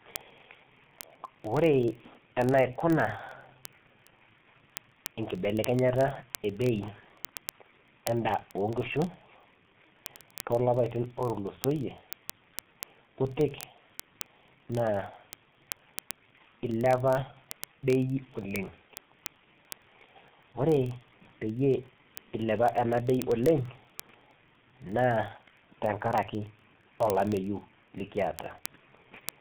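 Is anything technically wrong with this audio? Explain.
Yes, two faults run through this speech clip.

The first is heavy G.723.1 codec damage for the whole clip. The sound is confined to a phone-line band of about 150 Hz to 3.6 kHz, with nothing at all above 3.8 kHz. That ceiling and the coarseness of the coding fit a bitrate of around 6.3 kbit/s. Because the codec works in long frames and its model of the voice lags behind fast changes, speech comes out muffled and hoarse, and consonants smear into one another. A plain low-pass filter would dull the top end in the same way, but it would leave the grainy, roughened texture alone.

The second is word clock ticks, from 0.11 s to 29.41 s. They form a dense, regular train of sharp ticks, roughly one every 20 ms, and their strength varies from tick to tick. They come from a digital link whose receiving clock drifts against the sender's by something like 1000 ppm. 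At each slip a single sample is dropped or repeated, and the neighbouring samples are misread. What separates these from random clicks or vinyl crackle is their steady rhythm, which never changes for the whole clip.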